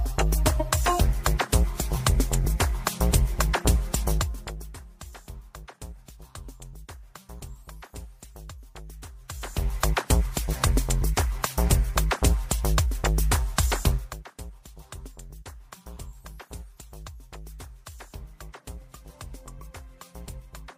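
No technical faults are audible.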